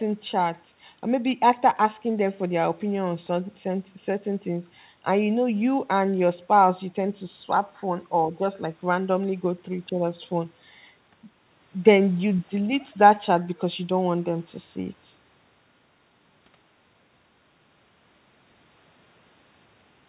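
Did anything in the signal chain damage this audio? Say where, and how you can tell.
No, nothing in the chain has damaged this speech; it comes across as an ordinary phone-band call through a G.711 A-law path at 64 kbps, with nothing above 4 kHz, just as that codec delivers it.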